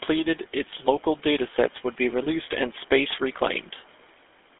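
Speech heard through a GSM full-rate codec from start to finish. The voice carries the coarse, buzzy graininess of a coder that models the vocal tract and excites it with a sparse, regularly spaced pulse train, discarding most of the excitation detail. The damage is plainly audible and consistent with a 13 kbps full-rate channel. The line band runs roughly 250 Hz to 3.5 kHz, and nothing survives above 3.8 kHz, leaving the sound thin and muffled.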